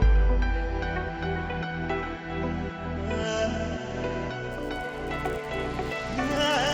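From 4.5 s to the end, a 100 Hz buzz rides on the audio. This is a resampler restarted on every block: each 10 ms block was converted from 16 kHz to 48 kHz alone, leaving an error at every block edge. Unlike mains hum, it stops whenever the signal does.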